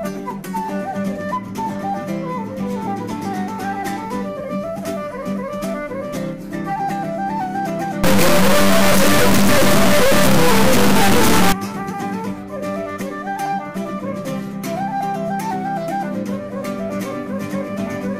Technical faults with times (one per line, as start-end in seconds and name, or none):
8.04-11.52 integer read as float